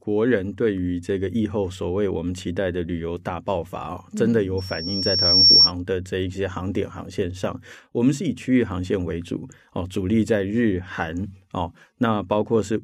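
At 4.57 s a loudspeaker feedback squeal starts: a single 5.5 kHz tone swells over about a second to roughly 10 dB above the speech, then stops at 5.72 s. That steady growth from the microphone-loudspeaker loop distinguishes it from a constant interfering whistle.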